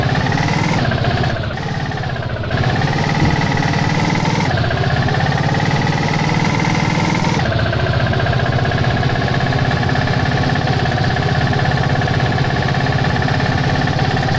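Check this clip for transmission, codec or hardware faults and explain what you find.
Nothing wrong can be heard in the signal: it carries the ordinary character of a WebRTC call path, with nothing above 8 kHz and a bandwidth and texture that fit the G.722 codec at around 64 kbps working as designed.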